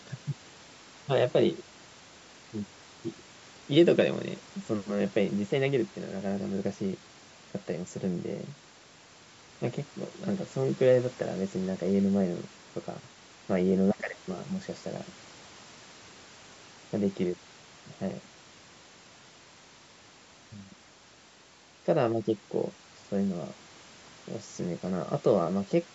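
No technical faults occur at any point in this speech; the missing lowest bass and the absence of anything above 8 kHz are simply the normal result of call microphone processing.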